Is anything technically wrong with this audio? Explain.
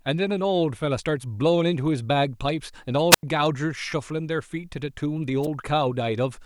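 Yes. Wireless microphone squelch dropouts occur at 3.10–3.23 s and 5.42–5.47 s. The analogue FM radio link weakens until the receiver's squelch shuts the output, so hiss rises briefly and the speech falls into near silence, for 88 ms and then about 7 ms.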